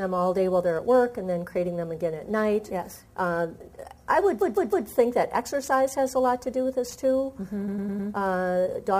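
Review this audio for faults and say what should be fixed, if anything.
Repeated frames at 4.40–4.87 s (a 157 ms block replayed three extra times) and 7.67–8.09 s (105 ms, four times). Duplicated compressed frames stutter and add time, whereas dropouts remove audio. Deduplicate frames by sequence number or timestamp before decoding.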